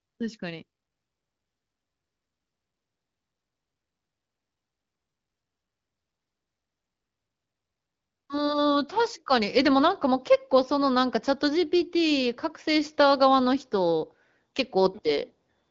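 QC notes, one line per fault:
Nothing to flag on this one: just speech carried over an AMR wideband (HD Voice) link at 15.85 kbit/s, with nothing above about 7.5 kHz, which is simply how that codec carries it.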